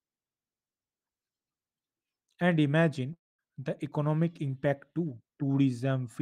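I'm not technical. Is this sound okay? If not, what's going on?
No. At 3.13 to 3.41 seconds, a long network dropout likely cut off the incoming audio. The speech trails into a fading buzz, then silence, and about a quarter-second is lost.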